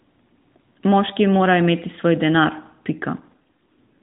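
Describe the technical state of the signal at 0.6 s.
At 0.6 s the speech is intact, with no fault present at that moment.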